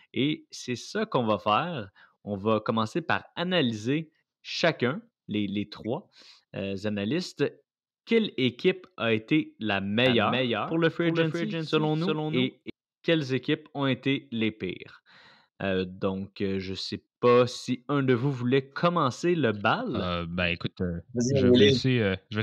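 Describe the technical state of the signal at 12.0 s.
At 12.0 s a second copy of the speech trails the first by roughly 0.4 s, only a few dB quieter, dry and abruptly switched, from 10.06 to 12.70 s, after "équipe a été la" and ending before "quelles équipes ont été". This doubled audio track is likely a slower second capture path mixed back in.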